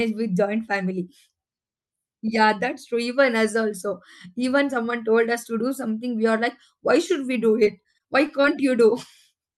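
Repeated packet loss (robotic sound) runs from 7.63 to 8.45 s: seven short gaps, each patched by stretching the previous sound, leaving the speech choppy and robotic.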